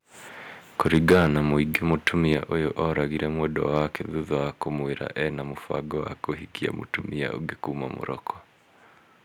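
Microphone overload from 0.79 to 1.37 s: the speech peaks run about 9 dB past the converter's limit with their tops flattened, a few percent of the audio squared off. This gives the loudest syllables a harsh, crackling edge, likely because the microphone input was set too high for the converter.

Microphone volume stepped down at 1.13 s: speech and background fall abruptly by about 3 dB in a single step, likely the call software cutting the device's input gain in response to that distortion.

Microphone overload from 1.75 to 2.34 s: the peaks are about 6 dB over the limit, with only a small fraction of the audio flattened. The result is a lighter crackle on the loudest moments, likely from the input still being too hot.

Microphone volume stepped down at 2.34 s: the level drops suddenly by about 4 dB right as that distorted stretch ends, likely a second automatic reduction of the input volume.

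Microphone overload from 3.76 to 3.82 s: a brief burst about 2 dB over, with around 1% of the audio clipped. It adds a harsh edge to the loudest syllables, likely the converter's ceiling being hit again.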